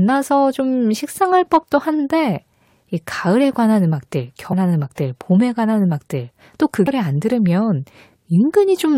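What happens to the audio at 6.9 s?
A brief blip cuts through the speech at about 6.86 s, lasting under 20 ms before the sound carries on. This is damaged data in a compressed stream. Part of the encoded file at that point is wrong, so the decoder misreads the affected frame, loses its place in the bitstream and hunts for the next valid frame header. The garbled or missing output from that misread frame is the blip.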